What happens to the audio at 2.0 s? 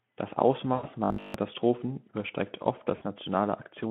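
Nothing goes wrong at 2.0 s; the speech carries on intact through that moment, with only the light coding character of its narrowband Speex path.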